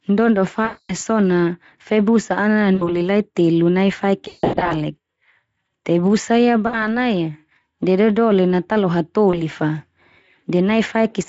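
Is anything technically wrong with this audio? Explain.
Yes. VoIP packet loss concealed by the speech codec occurs at 0.65–0.93 s, 2.75–3.01 s (just before "lai telu nai faik"), 4.27–4.81 s (right after "lai telu nai faik"), 6.67–6.98 s and 9.31–9.44 s (after "na ta lo"). Across these five events, between about 20 and 320 ms of audio goes missing. The decoder fills each gap by extending the last pitch and filter shape with falling gain, so the speech smears into a fading buzzy or coloured tone. It then sounds weak or distorted briefly after packets resume.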